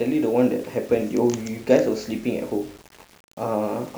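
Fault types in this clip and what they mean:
Low bit depth without dither: the speech was likely rounded to very few levels, about 7 bits, with no dither, so the error tracks the signal. Throughout, a grainy distortion sits roughly 30 dB below the speech, roughening quiet syllables and dropping to silence or sputtering as they fade.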